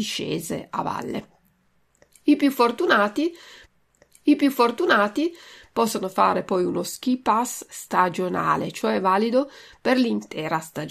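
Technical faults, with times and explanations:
3.65 to 5.64 s, stream segment repeated: right after "I più fortunati", about 2.0 s of speech plays again after a small blip, because the player fetched or queued the same segment twice.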